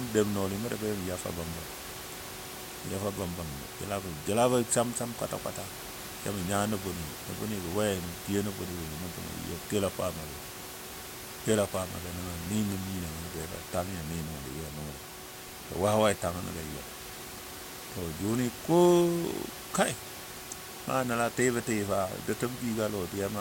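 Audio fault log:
No faults are heard anywhere in this speech clip. Room noise sits in the background at about 11 dB below the speech, as part of the recording space.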